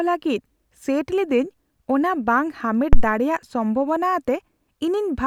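At 2.93 s a phantom power thump hits. A supply switched on or off on the live input, and the step drove the coupling capacitors. It peaks at about -1 dBFS and decays within 31 ms.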